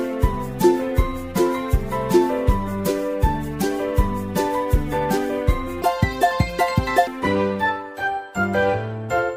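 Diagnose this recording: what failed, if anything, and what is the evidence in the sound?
Something slipped in one section. From 5.82 to 7.07 s the sound plays at twice its proper rate, and the pitch jumps up with it, roughly ten semitones higher, so that stretch comes out high and hurried before dropping back to normal. That's a classic section at the wrong speed. Speed and pitch move together, which points to a clock mismatch at the editing or playback stage, likely a segment rendered or resampled against the wrong rate rather than anything in the wiring or codec.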